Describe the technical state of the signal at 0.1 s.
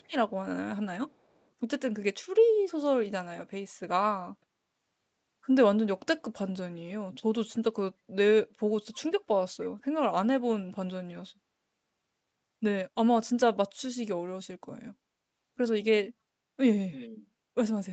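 At 0.1 s there is a brief echo leak, 0.02 to 0.13 s: a very faint copy of the speech returns about 288 ms late, likely from an incompletely cancelled loudspeaker pickup. It is a discrete repeat, unlike reverberation's smooth tail.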